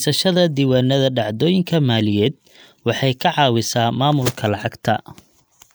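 Speech recording with no technical faults to report. Nothing in the audio points to a problem anywhere in the recording or playback chain.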